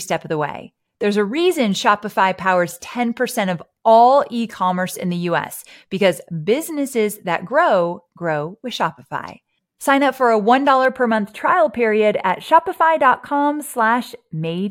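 From 10.85 s to the end, channel delay (comb filtering) makes the speech sound hollow. One channel trails by roughly a tenth of a millisecond, so the mono sum cancels evenly spaced frequencies starting around 5 kHz. Unlike flanging, these hollow notches stay fixed.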